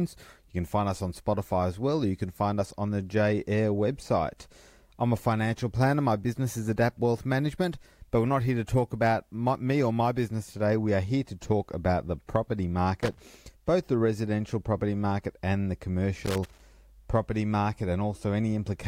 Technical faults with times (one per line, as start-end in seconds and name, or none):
13.01-13.20 loose connector crackle
16.26-16.60 loose connector crackle